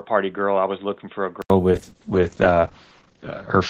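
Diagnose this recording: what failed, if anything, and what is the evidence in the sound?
From the start to 1.5 s the speech is dull and boxy, with nothing above 3.8 kHz, about 10 dB quieter and over a faint new noise floor, then an 80 ms silence. It's likely an input switch to a poorer device at the driver stage, its narrow band and own noise replaced at the switch.

From 1.72 s to the end there's a call bitrate drop: the top end falls from 20 kHz to 8 kHz and the speech turns rough and watery, worst for about 1.24 s. That points to the network estimate pushing Opus from roughly 32 down to 8 kbps.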